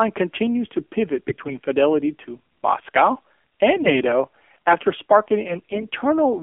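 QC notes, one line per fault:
Throughout: AMR narrowband mobile codec. Low-rate speech coding, likely near 7.4 kbps, strips everything outside 250 Hz to 3.4 kHz and leaves the voice buzzy and synthetic.
1.28–1.55 s, 3.76–3.93 s, 5.48–5.86 s: AMR bit errors. A few percent of the weakly protected frame bits arrive flipped, so the voice keeps its pitch and level but turns hoarse and gargly.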